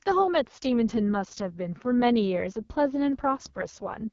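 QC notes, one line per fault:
Throughout, AMR wideband (HD Voice) codec: the speech sounds rough and raspy, with nothing above 7.1 kHz, which points to the lowest rate, about 6.6 kbit/s. A pulse-excited vocal tract model rebuilds the voice coarsely, and noise fills the top band.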